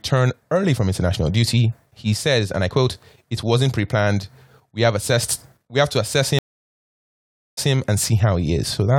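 A stream reconnect occurs at 6.39 s and runs to 7.72 s. The connection dropped, the speech cuts out, and about 1.19 s of silence follows while the player re-establishes the link and starts a new decoder partway through the stream. When sound returns, it picks up 0.15 s earlier than where it stopped, because the server resent a short burst. The listener briefly hears a repeated fragment, and the first moment eases in softly rather than starting at full level.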